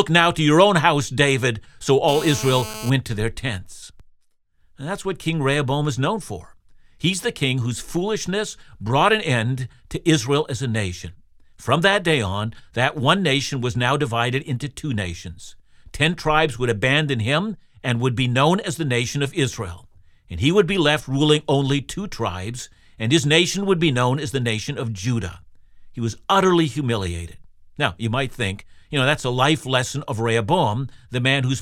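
From 2.08 to 2.90 s, just before "to their tents", a GSM phone buzz sits under the speech: a hard, raspy tone at about 217 Hz, roughly 12 dB below the signal. A nearby 2G handset on a call is transmitting in rapid bursts, and the audio circuitry rectifies each radio pulse into a click. The buzz holds steady throughout. A spectrogram shows evenly spaced horizontal lines at multiples of 217 Hz reaching well into the kHz range. The waveform carries a regular pulse train repeating every 4.6 ms.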